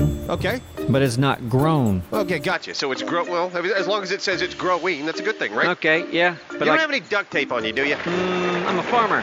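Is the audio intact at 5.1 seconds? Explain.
No. From 2.52 s to the end of the clip, the input likely switched to a poorer device partway through the recording. That device passes a narrower band, so at 5.1 seconds nothing above about 7.1 kHz gets through. The sound turns duller and boxier, with a faint new noise floor well beneath it. The level stays roughly the same, and there is no silence at the changeover, just a sudden shift in tone.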